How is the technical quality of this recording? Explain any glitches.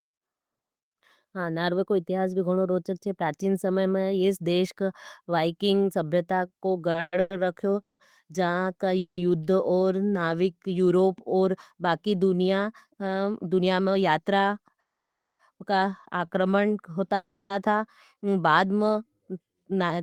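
The recording suffers from network delivery problems: a run of stutters, two stretches where the audio is sped up, and two freezes. Little or nothing of the speech is actually lost.

Repeated stalls (stutter), 6.91 to 9.20 s, just after "का वाइकिंग सभ्यता को": Packets kept arriving too late to play, and the jitter buffer emptied five times. Each time, the receiver stretched out the last sound until audio resumed, for 610 ms in total, with the longest gap 190 ms. That filler makes up about 27% of the stretch, so the speech drags and stutters.

Jitter buffer speed-up, 13.44 to 14.26 s and 19.19 to 19.98 s: After late packets arrived in a bunch, the buffer held more audio than it needed. The receiver trimmed short pitch-period slices to catch up, about a tenth of a second the first time and somewhat less the second. The speech runs at 111% and then 109% speed with unchanged pitch, so it sounds hurried.

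Call audio freeze, 14.80 to 15.41 s and 17.15 to 17.52 s: These were likely caused by packets held up in transit, which left the buffer empty. In the first freeze, the sound dies away into 560 ms of silence within a 590 ms hold. The second freeze lasts 350 ms and is mostly a fading continuation of the last sound, with only 60 ms of silence. In both cases the speech resumes where it stopped, so a pause is inserted rather than anything being cut.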